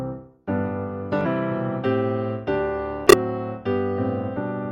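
An unstable converter clock, with sample clock jitter of roughly 0.4 microseconds, puts a faint hiss or roughness about 50 dB below the audio throughout, strongest on loud, bright passages. Damaged data in a compressed stream makes the decoder lose sync and hunt for the next frame, producing brief chirps or blips from 1.21 to 1.26 s and from 3.07 to 3.14 s.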